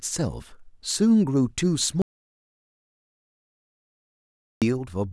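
At 2.02 s the speech cuts off into dead silence that runs until 4.62 s, about 2.6 s with no room tone at all, then returns mid-flow. That's an audio dropout to silence, likely a lost input writing silence, so whatever was said there is gone.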